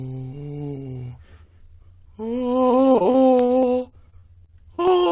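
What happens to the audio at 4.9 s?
At 4.9 s the music is inside a stretch of repeated packet loss (robotic sound) running from 2.92 s to the end at 5.11 s. Audio packets keep going missing or arriving late, and each hole, the longest about 40 ms, is covered by stretching out the last received sound before the next dropout hits. About a fifth of the stretch is filled this way, so the music turns choppy, with fragments missing, all heard through the call codec's band limit at 4 kHz.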